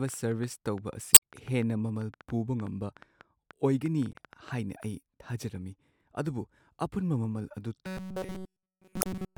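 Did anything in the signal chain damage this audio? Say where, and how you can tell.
Yes. A train of clicks runs from 0.09 to 4.84 s, about 5.6 per second, irregularly spaced, peaking about 5 dB above the speech. Likely interference in the analogue wiring or converter.

Damaged data in the compressed stream shows as blips at 1.12 to 1.21 s, 4.12 to 4.16 s and 8.99 to 9.06 s. The decoder loses sync and searches for the next frame header.

Robotic sound from repeated short buffers runs from 7.87 s to the end. A rigid 188 Hz buzz replaces the speech, likely a driver re-playing a roughly 5 ms buffer.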